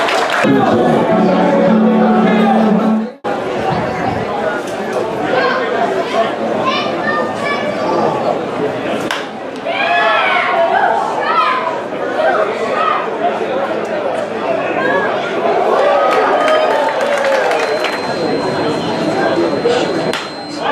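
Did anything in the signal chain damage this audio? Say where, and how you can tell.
Yes. From 17.51 s to the end at 20.72 s, a steady 4.1 kHz feedback whistle sits about 20 dB below the sound, swelling and fading slowly in level, likely from an analogue speaker-to-microphone loop held at the edge of oscillation.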